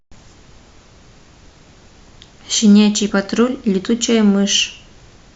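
At 0.81 s and again at 3.09 s, compressed frames are skipped. The speech jumps forward, losing about 20 ms the first time and roughly 40 ms the second. That fits one and then two missing 20 ms frames. On a waveform the envelope shifts abruptly. On a spectrogram, harmonic lines break and resume slightly displaced.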